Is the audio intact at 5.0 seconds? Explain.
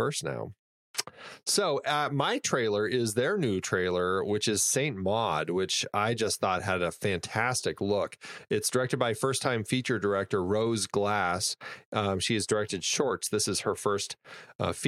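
Yes, the speech at 5.0 seconds is intact, with no dropout, glitch or other fault at that moment.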